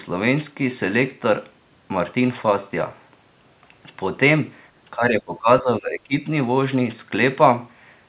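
From 4.96 to 6.14 s the speech is suppressed in double talk. It drops by up to about 20 dB for roughly a second in all, likely because the echo canceller mistook it for echo. The waveform visibly shrinks there, and the spectrogram fades across the band.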